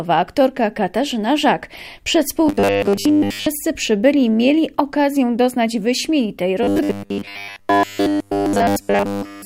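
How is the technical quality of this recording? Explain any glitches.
The recording has two stretches of robotic sound from repeated short buffers, from 2.46 to 3.46 s and from 6.63 to 9.45 s. The likely cause is audio arriving too seldom, so the playback fills the gaps by looping roughly the last 10 ms while most of the real signal is skipped. That loop imposes a fixed 100 Hz buzz, turning the sound into a rigid, metallic buzz that only loosely tracks the original.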